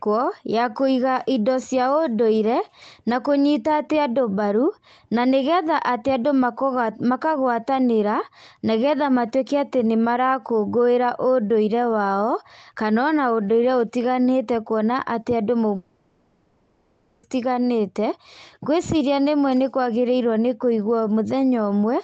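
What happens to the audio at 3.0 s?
Nothing goes wrong at 3.0 s: the speech carries on intact through the call path, with only the ordinary Opus coding character and its high-frequency limit at 8 kHz.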